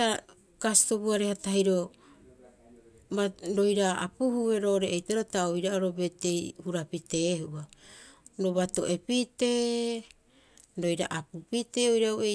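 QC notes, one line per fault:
No technical faults can be heard anywhere in the speech recording, and the signal stays continuous and stable throughout.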